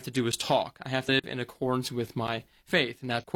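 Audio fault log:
0.32 s, 1.20–1.24 s and 2.27 s: block of digital silence. The output buffer apparently went unfilled, so the sound drops straight to zero and back. The holes at 0.32 s (just after "to do") and 2.27 s (just after "in accordance with") last 10.67 ms, which fits a 512-sample buffer. The one at 1.20 s lasts 42.67 ms, matching 2048 samples.
1.05–1.09 s and 3.18–3.24 s: damaged data in a compressed stream. Corrupt frames make the decoder misread the data and lose sync while it hunts for the next valid header. This disrupts the sound first between "talk I have" and "in accordance with", then near the end.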